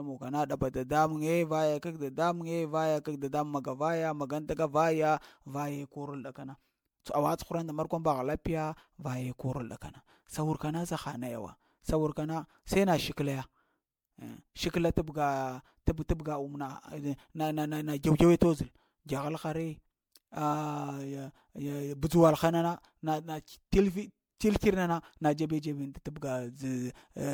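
From start to finish the speech carries a swirly, hollow, smeared quality, with consonant attacks blurred. This is generation loss: the audio was likely decoded and re-encoded around five times with MP3, each pass quantising on a shifted frame grid so noise and spectral holes accumulate. The damage exceeds what a single encode would leave, which fits repeated 96 kbit/s MP3 passes, and nothing remains above 20 kHz.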